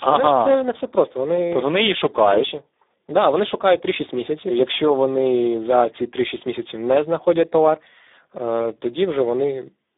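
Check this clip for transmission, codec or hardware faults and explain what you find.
There is one fault, and it runs through the whole clip: Speex codec damage. The speech sits only between 250 Hz and 3.7 kHz, with nothing above 3.8 kHz. Speex rebuilds speech from a predictor plus a coded excitation. The sound fits a low bitrate near 8 kbps, which leaves few bits for that excitation. The damage is heavy. The speech sounds noisy and hoarse, and the band is telephone-narrow.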